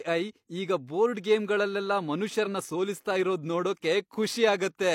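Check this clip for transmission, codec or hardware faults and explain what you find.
One codec fault stands out: compressed frames skipped at 2.42–2.48 s, between "ಈಗ ಬೋರ್ಡ್ ಗೇಮ್ಗಳಲ್ಲೆಲ್ಲ" and "ಸೋಲಿಸ್ತಾ ಇರೋದ್". About one 46.4 ms frame never got decoded, so the speech leaps ahead roughly 50 ms. The join is heard as an abrupt jump where that stretch of audio is missing. The waveform shows a discontinuity at the join, and the spectrogram a vertical seam.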